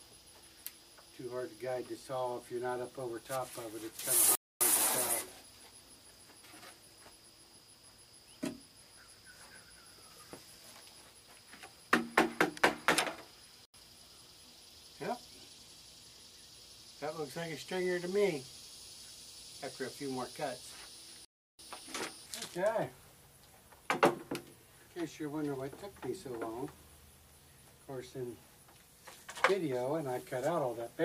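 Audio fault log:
4.35–4.61 s, 13.65–13.74 s, 21.25–21.59 s, block of digital silence: the audio drops to silence for 256, 85 and 341 ms, which fits missed buffers of 4096 and 16384 samples. Unlike a fade or a concealed dropout, each hole starts and ends abruptly.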